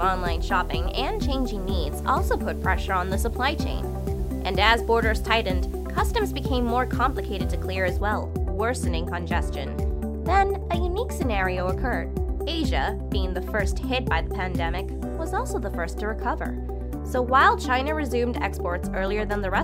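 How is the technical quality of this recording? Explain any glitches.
The first eight seconds have a problem: from 0.0 to 8.0 s there's a steady, even hiss sitting under everything, the classic sound of low bit depth with dither. The audio behaves like it's been squeezed down to about 9 bits, with dither noise added before rounding, so the quantisation error turns into flat white noise instead of gritty distortion. That hiss sits roughly 30 dB below the signal, constant and clean-edged rather than crunchy.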